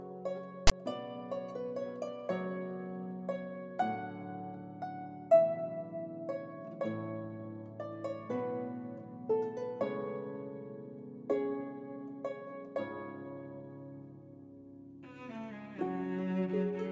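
A harsh, buzzing rasp with hard edges cuts in at 0.67 s and gives way to dead silence before 0.72 s. This is file tags played as audio: a block of text tags and their zero padding was decoded as samples, the text giving an offset rasp and the padding silence.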